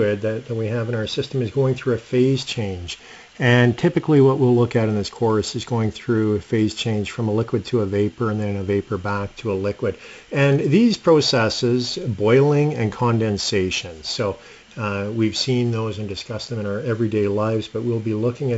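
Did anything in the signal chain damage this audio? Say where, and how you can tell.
No, nothing in the chain damaged this audio.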